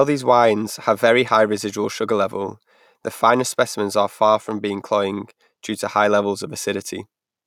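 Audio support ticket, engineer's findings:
Listened to the full speech recording and nothing stood out as a problem.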